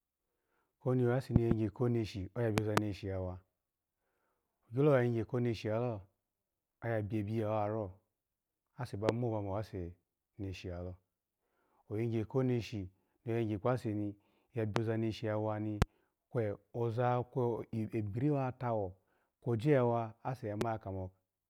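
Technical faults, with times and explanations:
1.36–1.54, 2.58–2.80, 9.09–9.11, 14.76–14.79, 15.82–15.84, 20.61–20.64 s: loud pop. The first two are double pops, the rest single. Each is a sharp transient about 20 to 25 dB above the speech, which continues underneath. This is likely a voltage spike from a switch, static or driver glitch, shaped into a thump by downstream circuitry.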